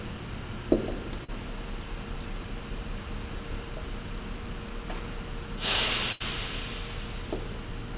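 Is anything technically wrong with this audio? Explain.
Yes, there are two packet-loss faults in the call audio, which passes through a G.711 A-law path at 64 kbps, so nothing is heard above 4 kHz.

From 1.24 to 1.31 s there is a short concealed packet loss. About 40 ms of audio failed to arrive in time, and the receiver bridged the hole by extending the preceding sound before crossfading back. It is heard as a brief smear or wobble.

From 6.12 to 6.23 s there is a burst of packet loss. Roughly 80 ms went missing, and the receiver kept repeating the last sound while attenuating it. The result is a held, fading tail, after which the audio jumps ahead with that stretch gone.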